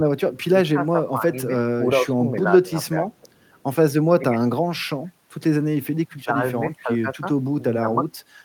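Speech suppressed in double talk at 0.46–0.75, 2.01–2.91, 4.19–4.38, 6.18–6.36 and 6.80–7.23 s. The speech dips or briefly drops out, deepest near 6.2 s, likely because an echo canceller turned down this side's speech along with the loudspeaker echo during overlap.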